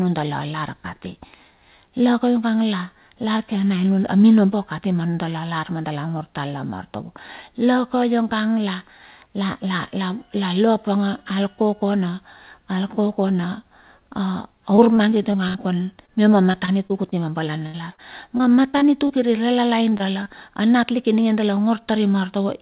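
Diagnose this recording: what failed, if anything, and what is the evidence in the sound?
Repeated packet loss (robotic sound) hits the network stage from 14.76 s to 19.11 s. The speech turns choppy as 16 separate holes open up, adding up to roughly 0.46 s of patched audio, about 11% of that stretch. The longest hole is 76 ms. Each time, the receiver's jitter buffer ran dry and concealment stretched the last received sound until real packets resumed. On a spectrogram, already cut off flat at 4 kHz by the G.711 path, the stretch shows repeated smeared, too-regular harmonic blocks. In the waveform, the envelope looks chopped, with repeated copies of a cycle bridging the holes.

Short concealed packet loss follows right after, also a network fault. Three isolated brief holes fall at 19.89–19.93 s, 19.97–20.01 s and 20.23–20.27 s, each with about 20 ms of missing audio synthesised by the decoder. 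Each one is heard as a small smear or wobble in the speech. On a spectrogram, each shows as a narrow column where the harmonics freeze or blur into noise before the real signal returns. In the waveform, it is a short patched segment followed by a crossfade.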